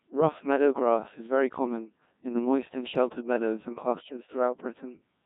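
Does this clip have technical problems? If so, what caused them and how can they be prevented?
Yes. Throughout the speech the Codec 2 vocoder has left heavy damage: a robotic, buzzy voice. The waveform isn't carried at all; only pitch, voicing, energy and a coarse spectral envelope are sent, and the decoder rebuilds the voice from sine waves. The crudeness points to the 1.6 kbit/s mode. Unlike a low-bitrate transform codec, there is no swirly, watery smearing; the whole voice is resynthesised. To prevent it, send speech through a waveform codec such as Opus at a higher bitrate wherever the channel allows.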